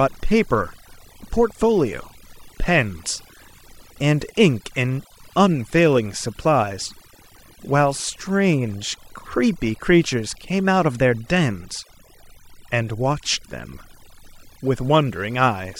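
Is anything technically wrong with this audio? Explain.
Yes. Throughout the speech there is overdone noise removal: bands sitting near the estimated noise floor are pushed almost to silence, taking quiet speech detail with them. Pauses become near-silent with twinkling specks. A noise gate would instead cut everything at once, without twinkling.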